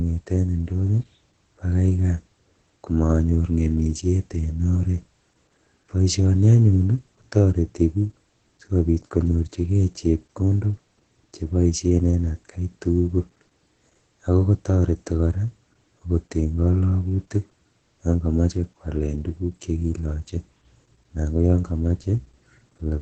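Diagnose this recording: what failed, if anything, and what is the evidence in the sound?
The codec stage is the culprit: Opus voice compression, heavy, for the whole clip. Nothing comes through above 9 kHz, and the speech sounds muffled, hoarse and a bit robotic. That's SILK's coarse excitation coding in wideband mode, which fits a starved bitrate around 10 kbps.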